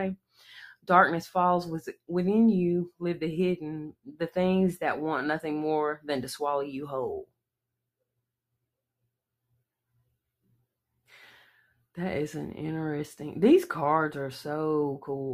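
Sound cut by the noise suppressor at 0.16–0.42 s and 3.91–4.21 s: misjudged as noise, the sound sinks by up to about 21 dB, dipping audibly.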